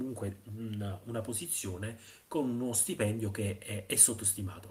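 At 2.07 to 2.09 s there is a lost packet rebuilt from error correction. A single packet of the speech went missing in transit, but the packet that followed carried a low-bitrate backup copy of it, and the decoder played that copy in place of the original. There is no audible gap, but for about 20 ms the audio turns rougher and noisier, a brief grainy patch where the coarser reconstruction stands in for the lost frame.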